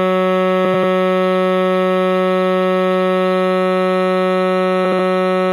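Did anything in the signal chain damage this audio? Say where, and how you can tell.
Yes. Frames out of order, at 0.65–0.84 s and 4.85–4.99 s, points to a network or packet-transport fault. In each stretch, two neighbouring blocks of the music play swapped, each block about 93 ms long in the first stretch and about 70 ms in the second. This produces a garbled flutter, though no time is lost.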